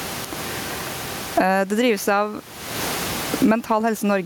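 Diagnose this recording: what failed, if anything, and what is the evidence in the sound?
Across the speech, the gain is pulled down on every loud syllable, swinging around 25 dB: gain pumping, likely excessive input gain driving a fast limiter.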